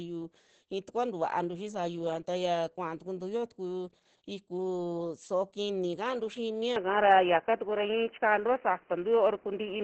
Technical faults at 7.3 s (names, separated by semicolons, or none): Opus voice compression; input switched to a poorer device